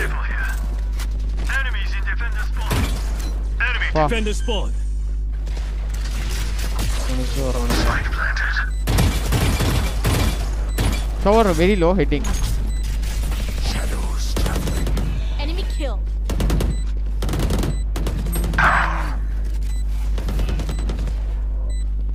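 No technical faults can be heard anywhere in this recording.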